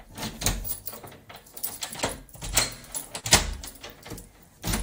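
At 3.19 s there is a short concealed packet loss, lasting until about 3.25 s. About 40 ms of audio never reached the decoder in time. The receiver covered the gap by extending the sound that came just before it, then blended back into the real signal. That patch fills about 38 ms. It is heard as a brief smear or wobble.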